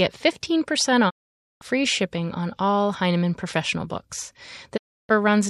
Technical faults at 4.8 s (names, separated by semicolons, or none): digital broadcast dropout